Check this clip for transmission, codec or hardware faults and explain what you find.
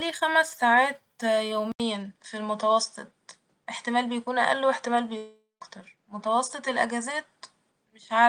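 Two faults are present: a change of input device that lasts to the end of the clip, and a long network dropout inside that stretch.

At 1.72 s the system likely switched its input to a poorer device. After an 80 ms silence at the switch, nothing remains above 9.4 kHz, so the sound turns duller, and a faint new background noise appears well below the speech. Overall level stays about the same.

From 5.17 s to 5.63 s a long network dropout likely cut off the incoming audio, and about 0.44 s of speech never arrived. The receiver extended the last sound as a fading buzz, then the final 0.17 s goes silent before the speech resumes.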